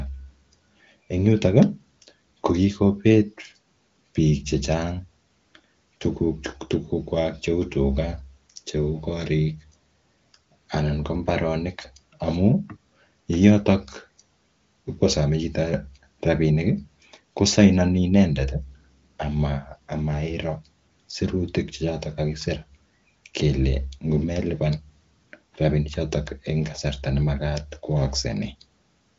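No faults to report: the speech comes over an AMR wideband (HD Voice) link at the upper end of that codec's quality, consistent with its 23.05 kbit/s mode, with nothing present above about 7.6 kHz.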